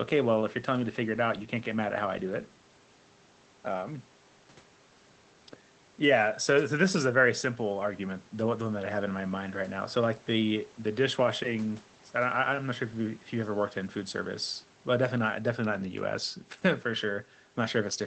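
Nothing goes wrong anywhere in this speech, and the call link it travelled over just does its ordinary job, with the top end stopping at around 8 kHz in a way that fits a low-bitrate Opus setting.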